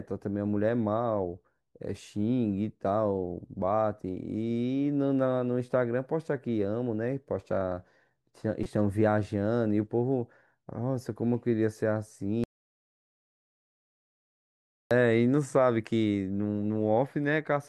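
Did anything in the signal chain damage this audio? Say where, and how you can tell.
Yes. The first damage sits at the codec stage. At 8.63 to 8.66 s a brief glitch cuts across the speech, lasting about 26 ms. That is a corrupt frame decoded. A single compressed frame arrived with flipped bits, and the decoder played it anyway. Misread gains and codes placed energy at the wrong frequencies for the length of that frame. The result is a short artifact unrelated to the surrounding sound.

The second fault is an audio dropout to silence from 12.44 to 14.91 s, about 2.5 s long. The speech cuts off mid-flow and returns just as abruptly. The gap is silent, with no room tone or noise floor underneath. That absence points upstream of the codec. The likely cause is that the input was lost, through a disconnected device, broken link or stray mute, while the recorder kept writing silence. Everything spoken during the gap is gone.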